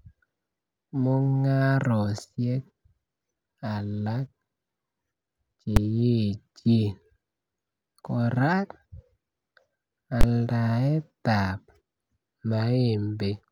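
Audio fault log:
5.76 s and 10.21–10.23 s, invalid numbers at full scale: the first is a single sharp bang lasting about 6 ms. The second is a longer crack of about 23 ms, with a hard edge at onset and release and no speech between. A calculation produced infinite or invalid values that were forced to the maximum sample value, so the output jumps to full scale for one processing block. That matches a block of 256 samples for the first and 1024 for the second.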